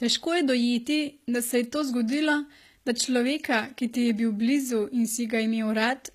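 Throughout the speech the treble sounds gritty and metallic, with s sounds turning lispy and nothing above 14.9 kHz. The likely cause is HE-AAC compression at a low rate that fits roughly 20 kbps. It rebuilds the upper band by copying lower bands upward, so those harmonics never match the real ones.

At 2.08 s a brief hiss of about 16 ms leads into an attack, leaving it soft and smeared. This pre-echo arises because the codec spreads quantisation noise across its block, filling the quiet instant before the onset.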